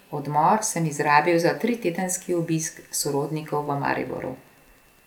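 From 1.48 s, right after "odmor sem izrabil", Wi-Fi interference starts and continues to the end. A nearby Wi-Fi radio's beacon bursts are being rectified by the audio circuitry, giving a steady ticking about ten times a second, once every 102.4 ms, sitting well below the speech at roughly 40 dB down. A spectrogram shows thin, evenly spaced vertical broadband lines, and the waveform shows small regular spikes between the speech peaks.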